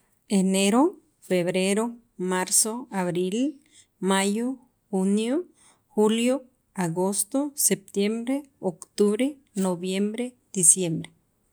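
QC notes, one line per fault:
No fault to note in this speech clip.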